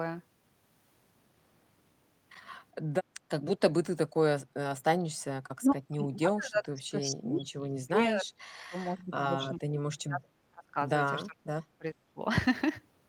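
Speech suppressed in double talk affects this speech recording at 3.86–4.43 s, 5.19–5.36 s, 5.59–8.33 s, 8.53–10.77 s and 11.26–12.2 s. In each of these stretches the talker's level sinks by roughly 20 to 35 dB, deepest in the first dip, and the two longest stretches lose seconds of speech. The likely cause is an echo canceller that, with both ends talking at once, couldn't separate near speech from loudspeaker echo and turned both down.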